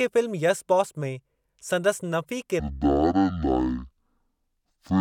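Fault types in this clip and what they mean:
Stereo read as mono: From about 2.6 s to the end at 5.0 s, the left and right channels of the speech are read one after the other as if they were a single stream. Each stereo frame turns into two mono samples, so the speech runs at half speed and sits a full octave low, 12 semitones down. A fainter mirror image of the sound also shows up in the upper half of the spectrum.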